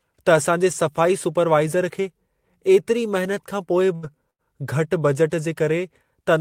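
Around 3.95 to 4.06 s, and again from 4.31 to 4.42 s, the speech hits a burst of packet loss. About 80 ms went missing each time, so the receiver stretched the last sound into a fading buzz or hiss of roughly 75 ms before jumping ahead.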